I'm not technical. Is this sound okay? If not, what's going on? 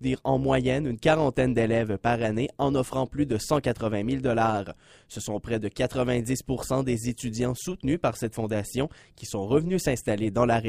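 No. The sound has an overlap-add ripple from start to finish. Somewhere in processing, the audio was chopped into many tiny overlapping slices and glued back together, but the overlaps were not matched, so the joins do not blend evenly. The loudness pulses up and down at every seam, roughly two hundred times a second, too fast to hear as separate beats. Instead it comes across as a metallic buzz over everything.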